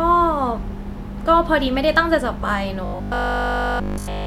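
From 2.86 s to 4.26 s the speech turns into robotic sound from repeated short buffers, a rigid metallic buzz locked at 50 Hz that loosely follows the words. The likely cause is a 20 ms slice replayed continuously. Unlike dropouts, no silent gaps appear.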